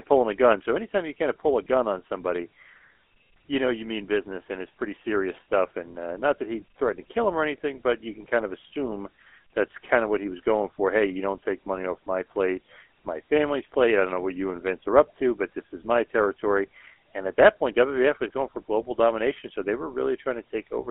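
From start to finish the speech carries the GSM full-rate codec's buzzy, gravelly roughness. A pulse-driven vocal-tract model rebuilds the voice, which fits 13 kbps GSM, within a 250 Hz to 3.4 kHz line band. A spectrogram shows nothing above 3.4 kHz and coarse, smeared harmonics.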